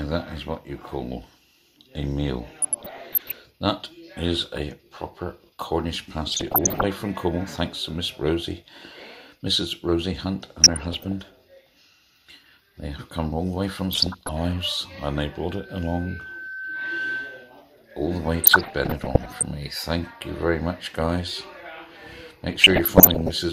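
DAB burbling appears from 2.62 to 3.35 s, 6.29 to 6.84 s, 10.64 to 11.12 s and 13.91 to 14.29 s. Bit errors slip past the error correction into the MP2 data. Wrong samples put short blips of noise in single sub-bands, and wrong scale factors make sub-bands jump in level for up to a frame.

From 15.49 to 17.63 s comes loudspeaker feedback squeal. A microphone hears its own loudspeaker, and the loop gain passes one at 1.5 kHz. That tone swells over about a second and a half, reaching roughly the level of the programme.

The burbling returns from 18.42 to 19.43 s and from 22.52 to 23.34 s. The error rate sits around half a percent, nearer one percent at 6.29 s and about 0.7 percent at 22.52 s.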